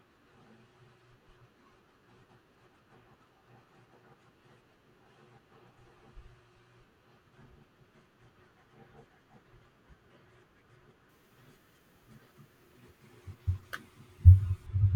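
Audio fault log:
11.09–14.67 s: pre-emphasis left on. The speech turns thin, bright and sharply sibilant because a treble boost following a 50 µs FM curve was never cut back, leaving 10 kHz about 10 dB above 1 kHz. On a spectrogram the upper band abruptly brightens.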